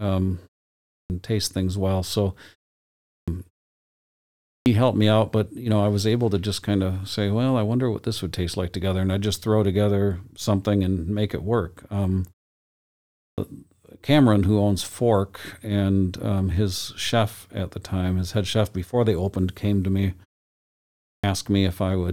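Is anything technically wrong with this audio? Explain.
Yes. Clipped start after a pause occurs five times, at 0.80, 2.94, 4.33, 13.07 and 20.91 s. Each time, roughly 0.3 s is swallowed as the output wakes from sleep. Speech begins abruptly, for example before "taste things well so" and "helped me out but".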